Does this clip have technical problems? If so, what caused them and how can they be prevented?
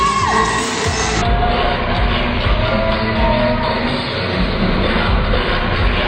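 Yes. From 1.22 s to the end, a section at the wrong speed plays at 0.548 times its proper rate, so the sound drops roughly ten semitones and drags. Timing and pitch fall together, unlike a pitch shift, which keeps tempo. The likely cause is playback or editing against a mismatched clock. Confirming that sample rates and clock settings match across the whole chain before rendering prevents it.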